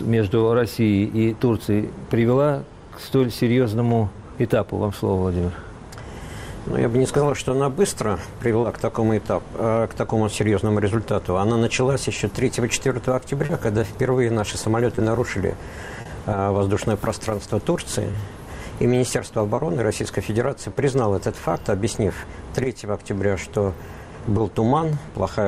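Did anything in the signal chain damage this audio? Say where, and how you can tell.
Yes, at the network stage: short concealed packet loss at 8.61, 13.45, 14.95, 16.01, 18.11, 19.55 and 20.73 s. Each is a brief smear or wobble where 20 ms of audio (40 ms at 13.45 and 16.01 s) arrived too late, so the decoder extended the preceding pitch or shaped noise, then crossfaded back. A spectrogram shows short patches of frozen harmonics or flat noise with soft edges. The waveform shows continued signal, not silence.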